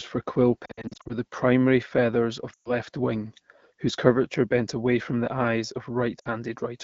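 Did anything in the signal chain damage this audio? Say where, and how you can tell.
Yes. The speech warbles in short dips from 0.66 to 1.13 s after "for quill", then drops to near silence at 2.53 to 2.72 s and at 6.19 to 6.28 s. These are lost AMR speech frames: radio errors failed the checksums, so the AMR-WB decoder replayed its last pitch and vocal tract settings at falling gain.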